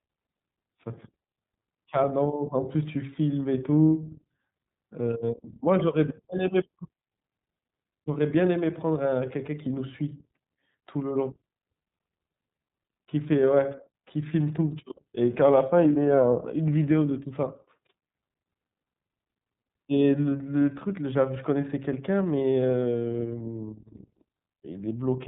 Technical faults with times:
0.00-25.27 iLBC codec

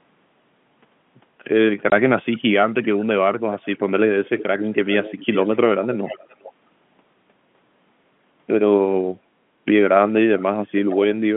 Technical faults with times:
1.90 packet loss filled with silence
2.25-2.38 echo leak
3.52-3.60 echo leak
4.25-5.57 echo leak
6.04-6.53 echo leak
10.89-11.15 echo leak

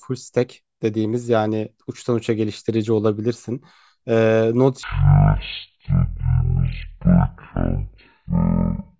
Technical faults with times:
4.83-9.00 wrong sample rate

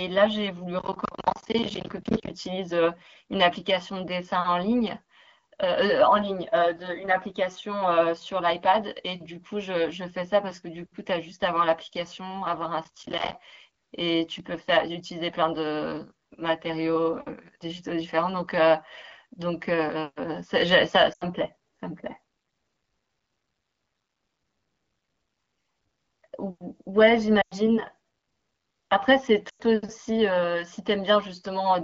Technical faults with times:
0.79-2.30 processor overload crackle
12.84-13.35 processor overload crackle
21.13-21.24 lost AMR speech frames
27.41-27.54 lost AMR speech frames
29.49-29.62 lost AMR speech frames

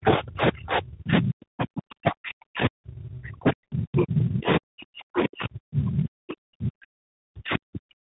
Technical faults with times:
0.00-8.02 tandem speech coding
0.00-8.02 speech suppressed in double talk
0.07-0.12 other side's voice leaking through

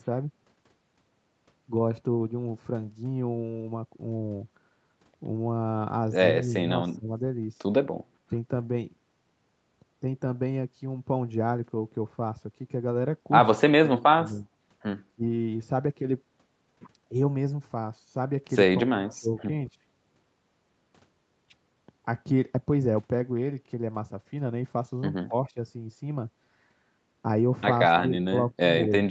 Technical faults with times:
6.44-6.57 speech suppressed in double talk
6.97-7.09 speech suppressed in double talk
13.61-14.50 speech suppressed in double talk
15.15-15.23 speech suppressed in double talk
18.84-19.30 speech suppressed in double talk
25.27-25.58 speech suppressed in double talk
28.00-29.11 speech suppressed in double talk

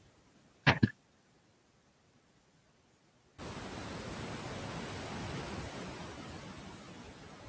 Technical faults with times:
0.00-7.49 noise suppressor artifacts

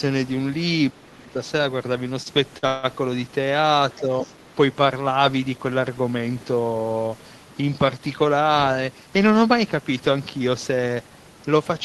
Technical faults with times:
0.92-1.36 speech suppressed in double talk
2.09-2.85 repeated stalls (stutter)
4.00-4.11 speech suppressed in double talk
4.21-4.52 other side's voice leaking through
8.55-9.38 jitter buffer speed-up

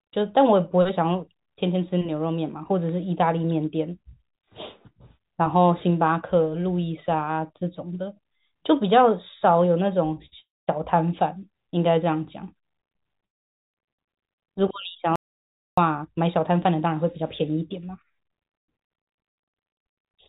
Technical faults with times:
10.14-10.34 short stall from a late packet
10.40-10.69 call audio freeze
13.25-13.75 call audio freeze
15.16-15.78 audio dropout to silence
16.04-20.19 jitter buffer speed-up

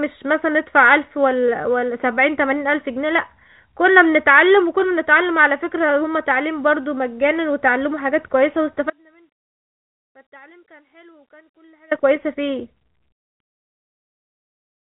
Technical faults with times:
8.90-11.91 audio dropout to a faint residue

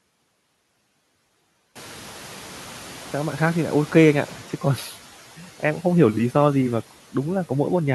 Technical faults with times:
1.75-4.40 noise suppressor catching up

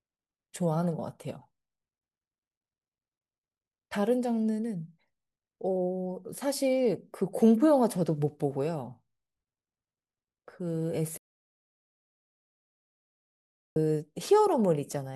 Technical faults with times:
11.18-13.76 audio dropout to silence

